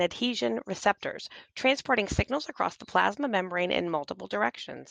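At 2.03 to 2.07 s the speech briefly smears, a short wobble where the sound blurs instead of moving on cleanly. This is short concealed packet loss: about 20 ms never arrived in time, and the receiver bridged the gap by extending the preceding sound before blending back.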